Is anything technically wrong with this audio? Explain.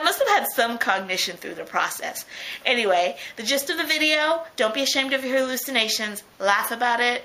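No, nothing is technically wrong with this audio.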